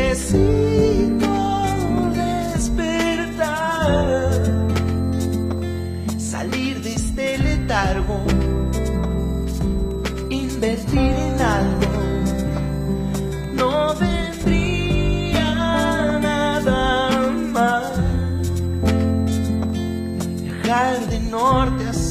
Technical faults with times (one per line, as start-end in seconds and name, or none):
0.00-22.11 switching supply whistle